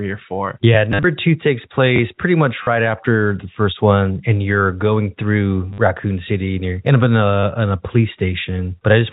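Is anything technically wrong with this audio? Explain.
Yes. Four short robotic stutters break up the speech, at 0.92 to 1.04 s, 2.63 to 2.67 s, 5.73 to 5.78 s and 7.40 to 7.43 s. Each has a buzzing repetition. This is packet loss with the last packet repeated. Audio went missing and the receiver replayed the last good packet until fresh ones arrived. The first event loses 70 ms in bursts spread over 120 ms, with the longest gap 50 ms. The others lose 40, 50 and 30 ms. The loss sizes fit 10 ms packets, so the repeats loop at about 100 Hz, giving the buzz. The G.711 telephone coding carrying the speech is working as intended, which is why nothing is heard above 4 kHz.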